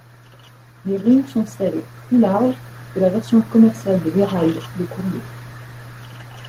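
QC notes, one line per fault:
0.84 to 4.14 s, automatic gain rising: the level climbs steadily by about 8 dB over roughly 3.3 seconds as the gain control, judging the input too quiet, turns itself up. The speech and the background noise floor swell together, which separates it from a talker simply getting louder.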